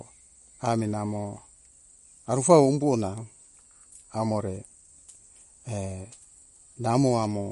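MP3 compression throughout: nothing sounds above 11.2 kHz, and the speech turns plainly watery and swirly, likely from an encoder starved of bits, fitting about 46 kbps.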